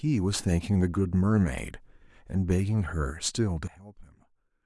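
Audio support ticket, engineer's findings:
Sudden gain jump at 3.68 s: speech and background noise drop together by about 20 dB within a single sample, held to end of clip. Likely a digital gain change applied without a ramp. Not a fade (no slope) or a dropout (signal continues, only quieter).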